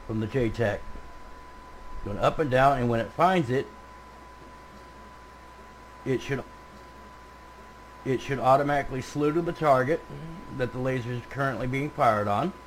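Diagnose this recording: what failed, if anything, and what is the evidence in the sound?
Playback stage: a stream segment repeated. From 6.37 to 8.36 s, about 2.0 s of audio plays again after a small blip. The player fetched or queued one segment twice.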